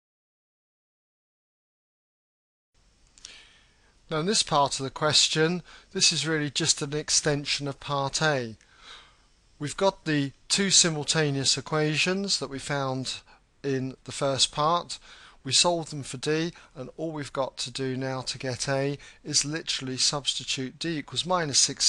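Nothing in the audio stood out as a technical problem on listening.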